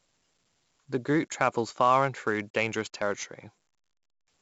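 Across the whole speech clip runs the gritty hiss of 4-bit ADPCM compression. Each sample is coded as a coarse 4-bit step from a prediction, so the error rides up and down with the loudness of each syllable, and heavy damage shows as harsh distortion on sharp onsets. On a spectrogram a grainy noise floor tracks the speech energy and stops at a hard ceiling near 7.7 kHz, which fits a 16 kHz sample rate.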